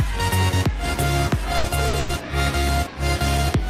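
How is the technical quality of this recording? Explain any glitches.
The recording has three brief playback hiccups, all packed between about 1.57 and 2.12 s.

The first two are a short stall from a late packet, at 1.57 to 1.67 s and again at 1.88 to 1.96 s. Each time, a packet arrived late and the jitter buffer emptied. The receiver held the last sound in place until the data caught up, for about 70 ms and then about 50 ms. Nothing is lost. A sound simply lingers too long, with a faint buzzy or dipping quality.

Right after, from 1.99 to 2.12 s, comes a call audio freeze. Here the sound stops moving forward and is continued as a buzz or hiss that fades. It never drops to full silence. The stretch runs about 100 ms, and then the audio resumes from the same point. The likely cause is packets held up in transit, leaving the buffer empty. Together, the three events push playback back by about 220 ms.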